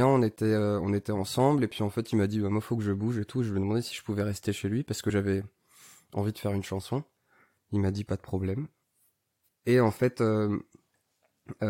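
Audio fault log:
5.09–5.11 s, compressed frames skipped: roughly 20 ms of the speech never plays, because that stretch of the encoded stream was missing or rejected by the decoder as damaged. The audio jumps straight ahead and the speech lurches forward slightly. A spectrogram shows a narrow vertical seam where harmonics shift abruptly, and the waveform shows a discontinuity in its cycle pattern.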